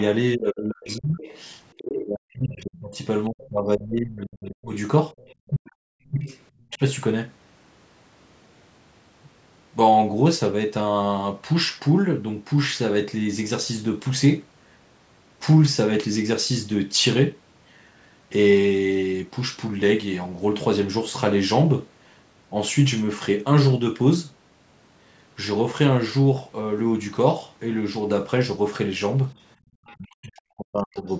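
Right from the start, 0.0 to 1.92 s, there's a second voice sitting underneath, about 15 dB below the main talker. That's the other side's voice leaking through, most likely loudspeaker echo the canceller didn't fully remove. Fainter scraps, roughly 30 dB down, come back at 5.18 to 6.78 s and 29.38 to 29.97 s, plus a tiny blip near 31.1 s.

Overlapping that, from 0.35 to 6.81 s, the talker keeps dipping and breaking up for around 4 s in total, sometimes by roughly 40 dB. That's speech suppressed in double talk: with both sides talking, the canceller likely couldn't separate them and turned everything down. It happens again for about a second at 29.98 to 31.06 s.

Between 29.56 and 29.7 s the room sound itself drops out by about 28 dB and then snaps back. That's background gated by the echo canceller, which clamped the microphone while the loudspeaker was playing and let go shortly after. 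The call's microphone path caps everything at 8 kHz.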